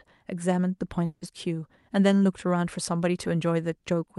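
From 1.05 to 1.23 s, the speech breaks off. The last sound is stretched into a fading buzz for about 160 ms, then brief silence. Speech resumes with that stretch lost. This is likely a long network dropout on the Opus call path.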